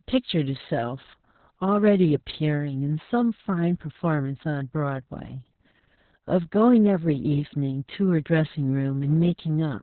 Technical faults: Opus voice compression

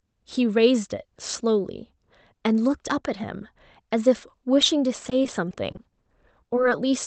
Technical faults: repeated packet loss (robotic sound)

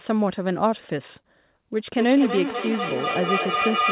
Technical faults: feedback howl

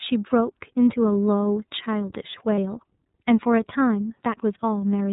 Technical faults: iLBC codec; lost iLBC frames

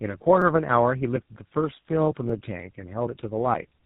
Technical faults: tandem speech coding; audio missing between chunks; repeated buffer

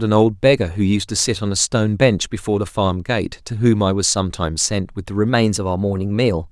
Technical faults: drift correction step

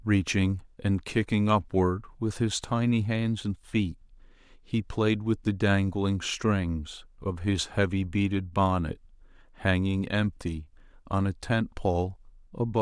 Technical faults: none

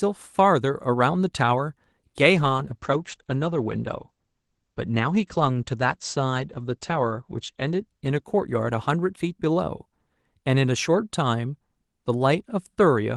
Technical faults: call bitrate drop

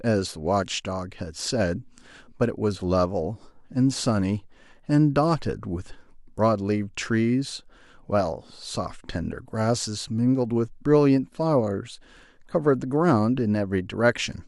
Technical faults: none

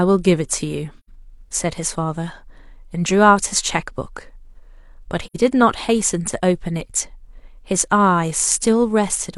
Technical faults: AAC frame loss with muting

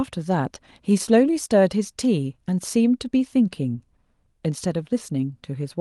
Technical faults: none

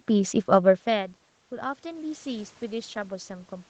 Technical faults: automatic gain rising

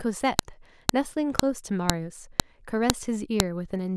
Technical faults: file header played as audio

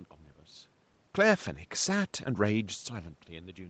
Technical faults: none

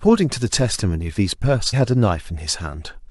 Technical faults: damaged data in a compressed stream

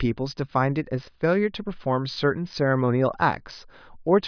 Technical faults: none

